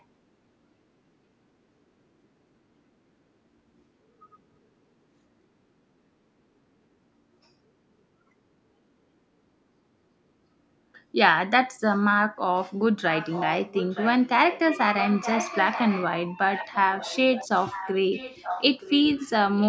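Speech, with an echo leak: a faint copy delayed 0.92 s, roughly 10 to 20 dB down, appears at 13.11, 14.45, 14.99, 16.54, 16.97, 17.7, 18.13 and 19.57 s. It is likely one side's loudspeaker echo canceller letting the sound through. On a spectrogram it shows as weaker ghost repeats of earlier harmonic patterns.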